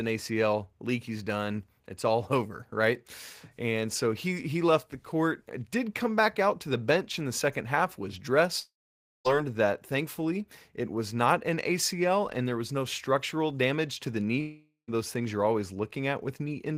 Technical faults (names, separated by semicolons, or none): long network dropout